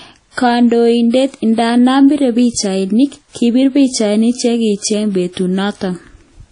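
From start to finish the speech carries a ringing, washy smear, with a hiss that swells and fades along with the voice, and nothing at all above 10.1 kHz. This is likely WMA compression at a low bitrate, fitting something near 32 kbps. Its long transform blocks spread quantisation noise over tens of milliseconds and drop weak spectral lines. A plain low-pass filter would dull the top without this breathing, smeared noise.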